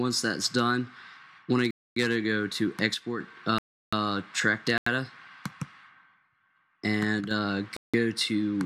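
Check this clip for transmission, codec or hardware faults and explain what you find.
Two kinds of fault are audible: four blocks of digital silence and two brief channel dropouts.

Block of digital silence at 1.71–1.96 s, 3.58–3.93 s, 4.78–4.86 s and 7.77–7.94 s. The audio cuts to silence without fading and returns just as abruptly. The gaps last 256, 341, 85 and 171 ms. Those lengths fit whole multiples of a 4096-sample block at 48 kHz, which points to an output buffer not filled in time.

One channel drops out at 2.94–3.20 s and 7.20–7.31 s. The level falls abruptly by about 6 dB, then recovers. This is likely one stereo channel briefly lost, so the mono sum keeps only half of the shared content.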